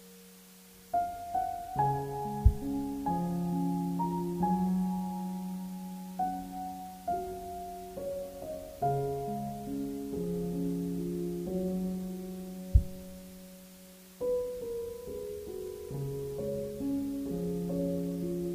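From start to finish the sound carries a constant, even hiss: low bit depth with dither. The audio fits an 8-bit word length, with random dither added before each sample was rounded, so the rounding error turns into steady white noise sitting roughly 20 dB below the signal. Unlike undithered quantisation, there is no gritty distortion that follows the signal and no pumping. The hiss stays level throughout.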